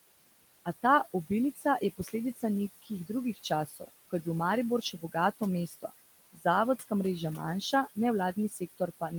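Noise suppressor artifacts run the whole way through. The suppressor pulls the room noise down by about 18 dB, leaving a residue that dips and swells around the speech. Speech cut by the noise suppressor hits at 0.65–2.43, 2.82–4.26, 4.82–5.91, 6.33–6.45 and 8.36–9.19 s. Soft stretches get mistaken for noise and ducked by about 16 to 18 dB, so they sound swallowed.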